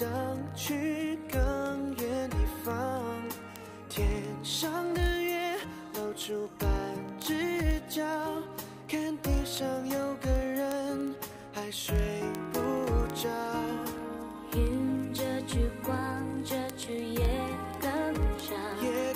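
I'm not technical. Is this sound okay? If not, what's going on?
No. From 0.13 s to 19.15 s there are word clock ticks, a fast run of sharp clicks, roughly thirty a second. Two digital devices are each keeping their own time, slightly out of step. Each time they slip, a sample gets dropped or doubled, making a tick.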